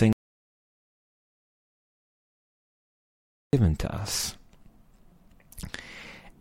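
At 0.13 s the speech cuts out abruptly. What follows is an audio dropout to silence lasting about 3.4 s, until 3.53 s. The gap is dead silence, with no room tone or hiss underneath. Speech then resumes mid-flow with "to us". Whatever was said during the gap is lost. The likely cause is a lost input, such as a disconnected device, a failed link or a stray mute, while the recorder kept writing silence.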